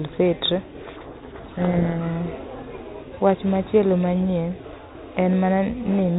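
From 0.82 to 2.01 s the speech is buried in harsh, grinding distortion, a codec payload misread: the two ends disagree on the bit order of the G.726 code words, so the decoder reads each sample's difference bits scrambled. The light, band-limited 32 kbit/s G.726 coding runs throughout.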